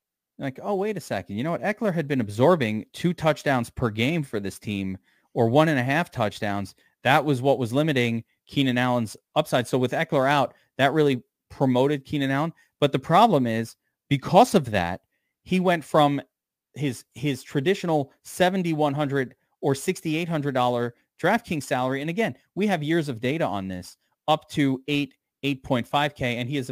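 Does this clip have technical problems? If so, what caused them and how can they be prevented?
Yes. Throughout the speech there is crude rate conversion: a gritty, inharmonic fizz riding on the louder and brighter sounds, sitting roughly 30 dB below the signal. The pattern points to a 48 kHz to 44.1 kHz change done by simply picking the nearest sample, with no filtering. Aliasing from plain downsampling can sound similar, but here the error tracks the signal continuously as a buzz tied to level. To prevent it, use a proper band-limited resampler.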